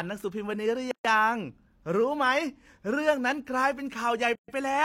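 Speech with two gaps at joins of encoded pieces. Silences open at 0.91–1.05 s and 4.35–4.48 s, about 130 ms each. Encoder delay and end padding were left untrimmed.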